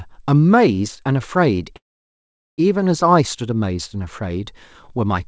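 Speech carried over a call path whose band stops at 8 kHz, which fits a wideband codec such as G.722, has one call audio freeze. Incoming packets were likely held up, draining the jitter buffer at 1.76 s. The receiver briefly extends the last sound, then falls to near silence for about 780 ms. At 2.60 s the speech resumes exactly where it paused, so nothing is lost, but an 820 ms gap has been inserted and everything afterwards runs that much later.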